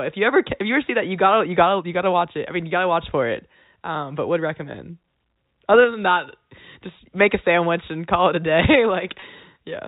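At 9.20 to 9.22 s, a 20 ms gap, which fits a single lost packet, shows packet loss with pitch repetition: the receiver filled the hole by repeating the last pitch period, so the speech briefly holds on a slightly buzzy, sustained tone before resuming through the G.711 telephone band.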